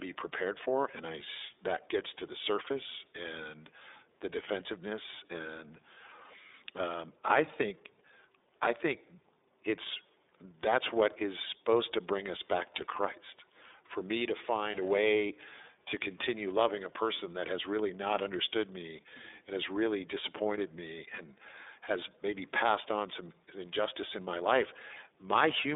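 From start to finish, the speech carries the iLBC codec's sound: a narrow telephone band of roughly 300 Hz to 3.7 kHz, nothing above 3.8 kHz, and a plainly rough, synthetic edge. Each 30 ms frame is coded on its own, at a rate that fits 13.33 kbps.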